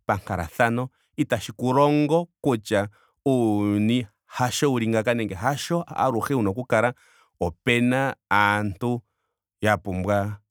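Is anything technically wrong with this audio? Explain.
No, nothing technically wrong jumps out here; this one sounds just fine all the way through.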